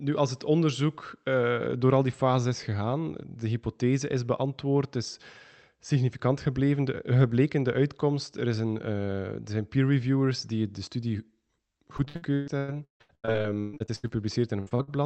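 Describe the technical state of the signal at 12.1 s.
At 12.1 s the signal is inside a burst of repeated packet loss (robotic sound) running from 11.97 to 14.17 s. Audio packets keep arriving late or not at all, and each hole is bridged by stretching the last received sound forward, with the longest gap about 156 ms. Nearly half of this stretch is synthesized concealment rather than real signal, so the speech turns choppy and robotic, with fragments dropped out.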